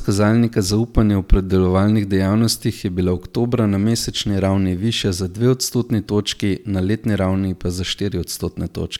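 No technical faults can be heard anywhere in this speech recording. Nothing in the signal path draws attention to itself at any point.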